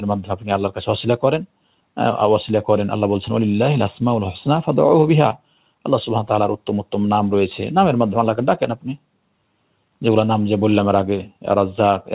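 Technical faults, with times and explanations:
Throughout: noise suppressor applied to music or sounds. A speech-tuned suppressor treats sustained content as noise, so level pumps by roughly 5 dB; waveform envelope visibly breathes.
0.21–0.49 s, 5.34–5.83 s, 8.76–9.02 s: sound cut by the noise suppressor. Held or decaying sound sinks by about 10, 12 and 12 dB; spectrogram shows brief darkened gaps, waveform shrinks.
Above everything, the call path's G.711 mu-law coding leaves nothing above 4 kHz, a hard ceiling on the spectrogram.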